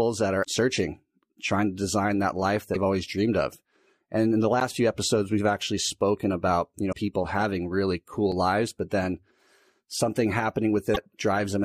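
Right at the start, around 0.41 to 0.45 s, there's a brief glitch. That's damaged data in a compressed stream: bytes in the encoded file went bad, the decoder misread those frames, lost sync and had to hunt for the next valid frame header. The same glitch turns up at 2.71 to 2.76 s, just after "to design that life" and before "always dreamed of", then again at 6.89 to 6.94 s and at 10.91 to 10.98 s.

In between, at 4.60 s, between "in the" and "few episodes we've actually", you get a quick tick. That's a block of digital silence, about 11.6 ms of samples dropped to zero, probably because the output buffer wasn't filled in time. The length fits a 512-sample buffer. The hard cut in and out is what you hear. A shorter one, about 5.5 ms, sits at 8.32 s between "people having really" and "lives but then".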